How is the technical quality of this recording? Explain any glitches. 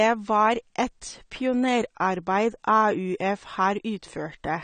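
The technical quality is compromised by audible lossy coding that runs through the whole speech recording. The cause is likely AAC compression, with an AAC-LC encoder working at a low bitrate, which fits something around 32 kbps. With so few bits per frame, the encoder discards the upper spectrum and coarsely quantises what remains. Nothing survives above 9 kHz, so the speech sounds dull and lacks air, and sibilants and sustained sounds take on a smeared, warbling, fizzy texture.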